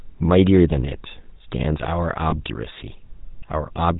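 From start to finish the speech passes through the GSM full-rate codec. Its character fits the 13 kbps full-rate scheme. The codec rebuilds the voice from a vocal-tract model driven by sparse, evenly spaced pulses. Much of the fine excitation detail is thrown away. Nothing above 4 kHz survives. The result is a plainly audible buzzy, gravelly roughness. Sibilants and brightness are gone, and the voice sounds boxed in.

At 2.30 to 2.34 s there are lost GSM frames. The gap points to a single 20 ms frame going missing. The decoder fills it by repeating the last good frame's settings. This is heard as a brief rough, metallic ring. The drop is too short to fade to silence.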